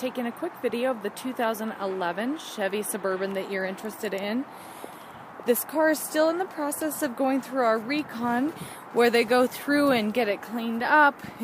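No technical fault can be heard anywhere in this audio.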